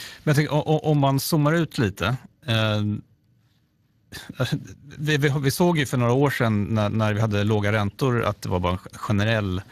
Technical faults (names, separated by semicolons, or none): Speex codec